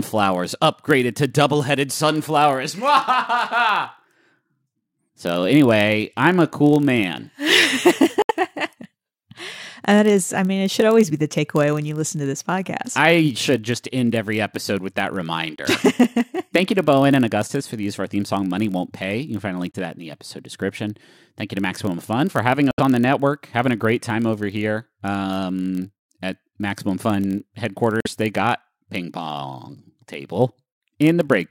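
Throughout the speech there is a block size mismatch (padded). Each block is topped up with zeros, cutting a tiny regular gap that buzzes at 43.1 Hz, which fits a 1024-sample read block. Its regularity separates it from random dropouts, and the slowdown to 0.999× leaves the timbre unchanged.

At 8.22–8.31 s, 15.56–15.60 s after "every episode with that", 19.71–19.76 s between "can find a link" and "to that in the", 22.71–22.80 s between "for having" and "on the network having", and 28.00–28.07 s, the sound drops to silence for about 40 to 90 ms. It then resumes further along, as though it had kept playing, which points to a likely Bluetooth dropout rather than a pause.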